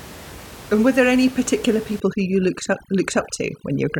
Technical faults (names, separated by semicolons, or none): overdone noise removal